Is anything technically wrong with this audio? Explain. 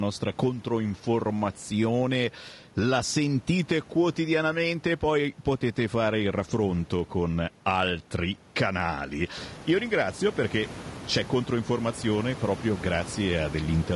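Yes. Throughout the speech the sound is rough and grainy, with a low-delay AAC compression artefact that is plainly audible, likely from AAC-ELD at a bitrate that fits about 32 kbps. Its short frames resolve pitch harmonics poorly, so quantisation noise fills the gaps between them and the top band turns thin and synthetic. On a spectrogram the harmonic stripes look smeared, with speckled energy between them and a patchy upper region. The room noise, which rises by about 12 dB around nine and a half seconds to sit about 17 dB below the speech, is part of the recording.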